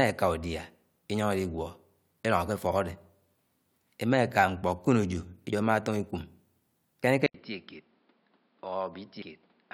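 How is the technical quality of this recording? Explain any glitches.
Not great: there are two short dropouts in the compressed stream and then a clear drop in quality for the last couple of seconds.

At 5.52 s and again at 7.03 s you get compressed frames skipped. The decoder never plays some frames, either because they're missing or because it rejected them as corrupt, so the audio lurches forward. The first jump loses roughly 50 ms and the second roughly 100 ms, which fits a couple and then about four frames of around 23 ms each.

From 7.26 s to the end, it sounds like the input switched to a poorer device, likely a different mic or a headset call profile kicking in. There's an 80 ms gap of silence at the switch. After that, nothing comes through above 5.4 kHz, so the sound turns dull and boxy. The level also falls by about 10 dB, and a new noise floor appears about 30 dB below the signal.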